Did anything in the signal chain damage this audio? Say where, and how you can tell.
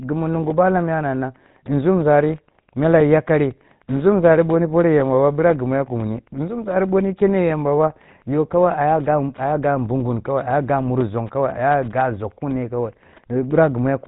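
Yes. The damage is at the codec stage and runs through the whole clip. The speech has the buzzy, gravelly roughness of the GSM full-rate codec, which fits a 13 kbps coder, and nothing is present above 3.8 kHz. This coder models the vocal tract as a filter and drives it with a sparse, regularly spaced pulse excitation that keeps only every third sample. That coarse excitation gives the plainly audible rasp.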